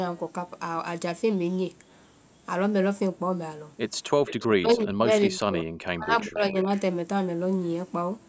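From 4.26 to 4.47 s there is an echo leak. The far end's echo canceller likely failed to remove its loudspeaker pickup, so a copy of the speech returns about 0.39 s late, a short scrap sitting roughly 15 dB under the main voice.

Immediately after, from 4.48 to 5.67 s, comes speech suppressed in double talk. With both sides talking, the echo canceller likely could not tell the local talker from the echo and turned everything down. The voice sinks by as much as around 40 dB over about a second of that span.

From 5.86 to 6.7 s the same suppression likely returns, dropping the voice by up to roughly 35 dB across about 0.7 s. Inside it, from 6.19 to 6.36 s, a fainter echo leak, likely from the same incomplete cancellation, again trails by 0.39 s, now about 30 dB down. The call processing's band limit, with nothing above 8 kHz, is not a fault.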